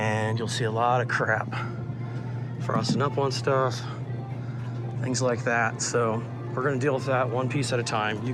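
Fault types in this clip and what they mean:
No fault types are present in this clip, so there is nothing here to explain.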